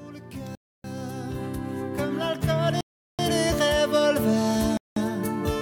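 Sound drops to silence at 0.55, 2.81 and 4.77 s for 0.29, 0.38 and 0.19 s, then resumes: likely a Bluetooth stall, with the headphone buffer running dry awaiting resent packets.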